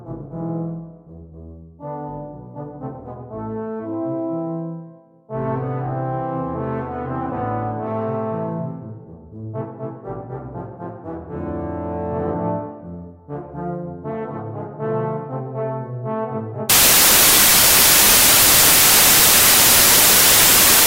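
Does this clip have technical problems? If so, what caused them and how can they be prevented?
Yes. From 16.70 s to the end at 20.87 s the samples are built from the wrong bytes: the reader assembles each value with its bytes misaligned or in swapped order, so the rapidly changing low-order bits end up as the most significant part of every sample. The result is loud, harsh broadband noise replacing the audio, close to white on the louder sounds. Prevention: declare and verify byte order, sample width and frame alignment wherever raw audio is read.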